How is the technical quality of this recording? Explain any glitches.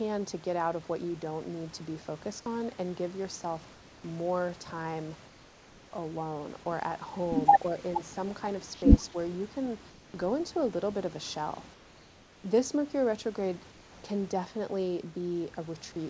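The speech carries audible glitches: the background in several pauses is replaced by synthetic noise, and the voice briefly dips once. The audio has nothing above 8 kHz, which fits a wideband call codec such as G.722, and steady room noise sits about 32 dB under the speech.

Comfort noise in place of the background occurs at 3.72–4.04 s, 5.28–5.92 s, 8.74–8.82 s, 9.90–10.14 s, 11.74–12.44 s and 13.72–14.04 s, lasting from 80 to 700 ms. The likely cause is discontinuous transmission. The sender stopped sending during these pauses, and the receiver filled them with generated noise. The real room sound gives way to a flat, textureless hiss about 2 to 3 dB quieter. On a spectrogram these gaps look smooth and uniform, without the fine grain of the true background. The waveform shows a slight step down in the noise floor at each edge.

Speech suppressed in double talk occurs at 9.10–9.16 s. This is likely the echo canceller reacting to simultaneous talk. 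Unable to separate the local voice from the far-end echo, it turned the signal down. For roughly 70 ms the voice sinks by about 15 dB. The waveform envelope shows a short notch. On a spectrogram the harmonics fade for a moment across the band, then return.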